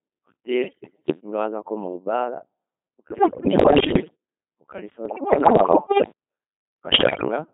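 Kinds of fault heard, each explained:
Codec 2 vocoder: The speech is rebuilt from pitch, voicing, energy and a spectral envelope, not from the original waveform, so it sounds heavily robotic and buzzy, consistent with a rate around 2.4 kbit/s. The band runs from about 200 Hz to 3.5 kHz. A spectrogram shows neat, comb-like harmonic stripes that stop sharply at those edges. The waveform looks too regular, built from synthetic sine sums rather than natural speech shapes.
Bit errors on digital voice radio: Corrupted bits change the pitch, level, voicing and tone colour of whole frames, so the synthetic speech breaks into bleeps, warbles and gibberish. This happens in four bursts: 0.62–1.20 s, just before "ninga waaza nkomu baara", then 3.10–4.15 s, 5.06–6.12 s (slightly milder) and 6.92–7.28 s. A spectrogram shows harmonic stripes jumping in pitch from frame to frame. The waveform shows blocky, frame-sized jumps in level.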